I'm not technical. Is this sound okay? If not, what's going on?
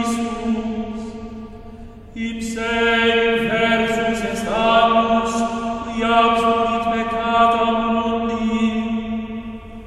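Yes, this music has no technical faults to be heard anywhere in the recording.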